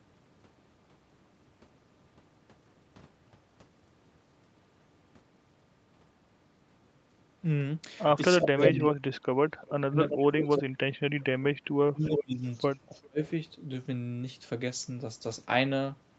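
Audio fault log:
8.41–8.87 s, 9.50–10.61 s and 12.16–12.78 s, echo leak: a second copy of the speech trails the original by about 0.38 s each time, at roughly the same level as the speech in the first instance and about 5 dB below it in the other two. This is likely a far-end loudspeaker echo that the canceller failed to remove. Unlike room reverberation, it is a distinct, repeated copy at a fixed lag rather than a smooth decaying tail.
8.50–12.45 s and 13.04–13.21 s, speech suppressed in double talk: the talker's level collapses in pieces, by up to roughly 30 dB across about 2 s in total in the first span and by roughly 35 dB in the brief second one. This likely happens because the echo canceller cannot tell the near talker from the overlapping echo and attenuates both. Unlike a dropout from packet loss, the gaps coincide with the other side talking.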